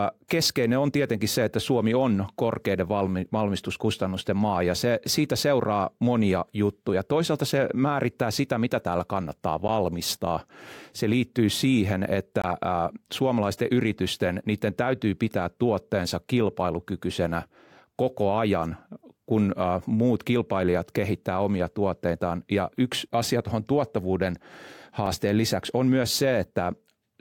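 Speech with three blocks of digital silence, where the audio drops straight to silence and back with no fade. The first is a short tick at 9.68 s, right after "sitä mitä täällä kannattaa", about 11 ms, fitting a 512-sample buffer. The longest hole runs 12.42 to 12.44 s, after "liittyy siihen", about 21 ms (1024 samples). A brief click at 25.06 s, just before "lisäksi on myös", lasts about 5 ms (256 samples). All three sound like the output buffer not being filled in time.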